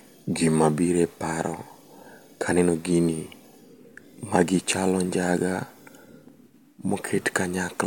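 Nothing in this speech recording stood out as a technical problem on listening.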